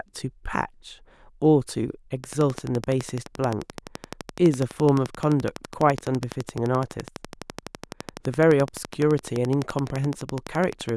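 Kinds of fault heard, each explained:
Train of clicks: evenly spaced ticks near 12 per second from 2.24 s to the end, peaking about 10 dB above the speech, likely outside interference; regular same-shaped pulses, unlike random crackle.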